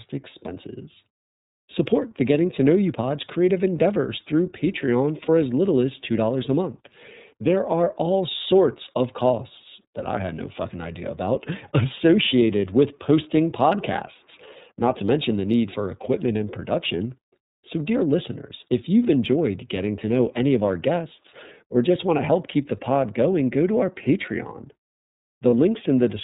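Throughout, the speech carries the sound of the iLBC codec: nothing above 4 kHz gets through, and the voice has a slightly rough, synthetic edge. The damage is plainly audible. The dull band limit comes from narrowband coding, not from a low-pass filter, and the texture fits iLBC's 13.33 kbps mode with 30 ms frames.

At 5.25 to 5.29 s, just before "as little as", lost iLBC frames briefly replace the voice with a held, faintly buzzy vowel. The decoder is repeating the last pitch cycle mixed with noise. The gap lasts about 30 ms, which points to a single lost frame. The voice returns cleanly straight afterwards, with no smeared recovery, and that sets it apart from the dropouts of codecs that depend on earlier frames.

At 25.49 to 25.54 s, the same lost iLBC frames fault recurs. Another roughly 30 ms gap is filled with a buzzy, breathy extension of the preceding pitch. Because each iLBC frame decodes independently, the speech snaps back immediately. 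A hard dropout would leave silence or a click, but here there is only this short held tone.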